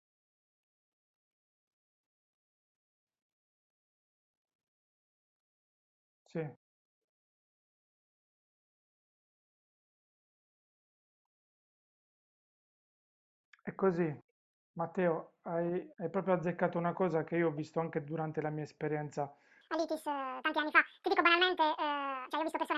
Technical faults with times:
19.61-22.78 wrong sample rate

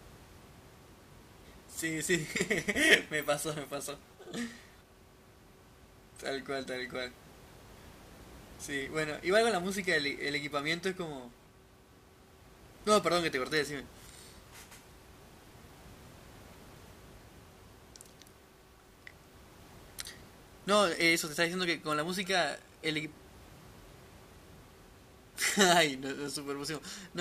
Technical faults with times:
none

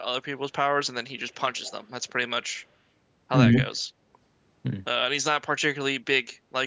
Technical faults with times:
1.55-1.72 echo leak

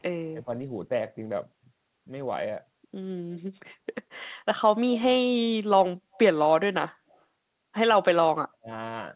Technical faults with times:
0.34-0.48 speech suppressed in double talk
6.14-6.19 echo leak
7.10-7.17 echo leak
8.37-8.69 speech suppressed in double talk

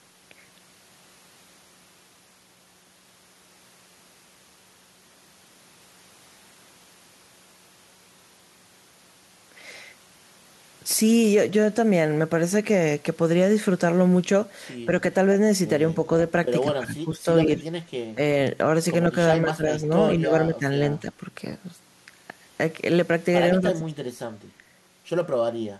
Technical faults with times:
14.86-14.92 speech suppressed in double talk
16.65-17.63 speech suppressed in double talk
18.14-18.20 speech suppressed in double talk
19.44-20.65 speech suppressed in double talk
20.99-21.07 speech suppressed in double talk
23.60-23.94 speech suppressed in double talk

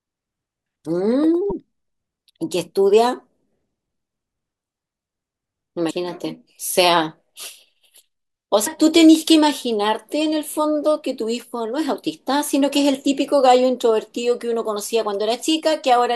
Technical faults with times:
1.48-1.52 damaged data in a compressed stream
5.87-5.91 damaged data in a compressed stream
8.63-8.67 damaged data in a compressed stream

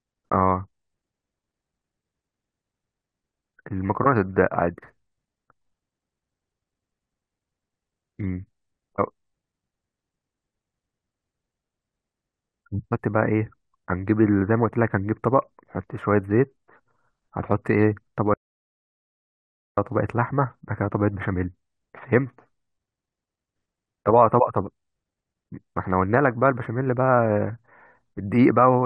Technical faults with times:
18.34-19.77 audio dropout to silence

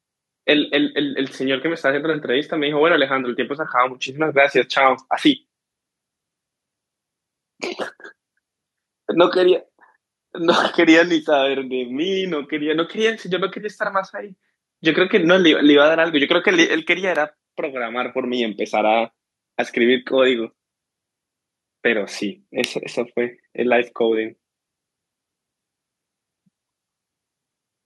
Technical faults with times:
17.15 electrical switching spike
22.64 electrical switching spike

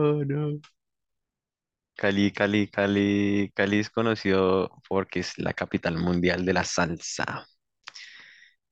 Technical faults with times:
none

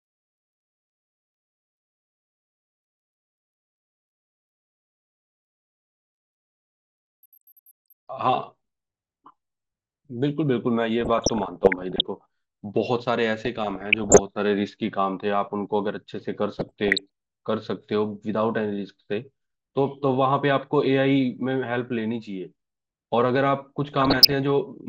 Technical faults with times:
11.01-12.01 DAB burbling
13.45-14.19 DAB burbling
16.59-17.06 DAB burbling
23.82-24.34 DAB burbling

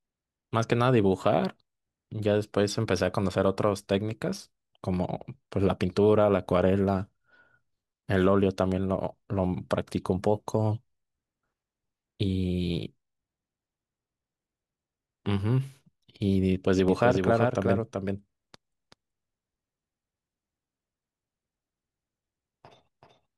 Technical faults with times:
16.88-23.38 doubled audio track

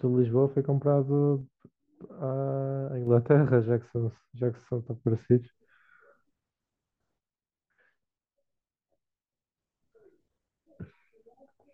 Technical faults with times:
1.41-3.07 one channel drops out
4.18-5.05 one channel drops out
7.18-9.58 one channel drops out

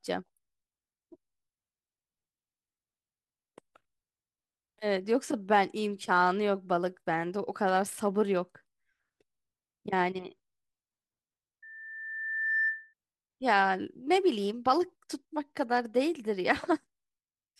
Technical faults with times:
11.62-12.94 loudspeaker feedback squeal

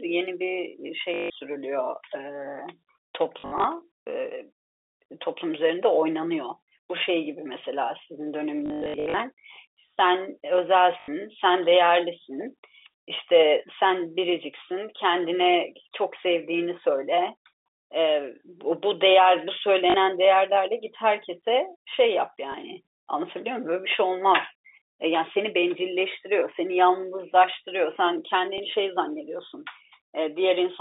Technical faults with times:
1.14-1.30 packet loss with last packet repeated
3.40-3.64 packet loss with last packet repeated
8.66-9.14 packet loss with last packet repeated
11.00-11.08 packet loss with last packet repeated
19.90-19.94 packet loss with last packet repeated
22.52 packet loss with last packet repeated
28.58-28.60 packet loss with last packet repeated

